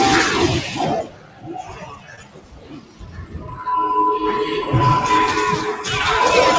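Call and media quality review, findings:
Noise suppressor applied to music or sounds, whole clip. Level pumps and flutters, with held material and tails pulled down by around 20 dB at the deepest while attacks pass. Probable component: speech noise suppressor left enabled. Mechanism: steady tones and ambience read as noise. Band stops at 8 kHz, which fits a G.722 call path at 64 kbps.

Sound cut by the noise suppressor, 0.62 to 0.80 s. Brief dip of about 5 dB over roughly a fifth of a second. Second, longer cut from 1.02 to 3.62 s, about 15 dB deep at worst, some three seconds affected. Sustained and decaying sound sinks and its decay is truncated. Probable component: same suppressor. Mechanism: gain reduction on steady content.

Short concealed packet loss, 2.16 to 2.19 s. Brief smear or wobble inside the suppressed stretch. About 20 ms missing, with 11 ms synthesised before blending back. 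Probable component: jitter buffer and decoder concealment. Mechanism: late packets replaced by extrapolating the preceding sound, then crossfaded into the real signal.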